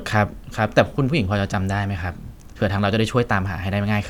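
No technical faults turn up anywhere in this recording of speech. At no point in the audio does anything go wrong in the signal.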